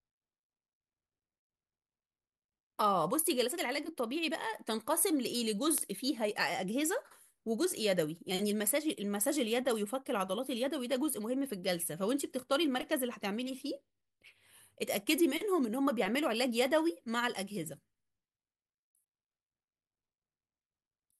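A speech recording carries two bit error spikes, where a single stored or transmitted bit flipped in one sample, throwing its value off by a power of two before the next sample returns to normal. Each is heard as an isolated, full-band tick with no relation to the speech: a quieter one at 3.29 s peaking at about -28 dBFS, and a much louder one at 5.78 s reaching about -10 dBFS.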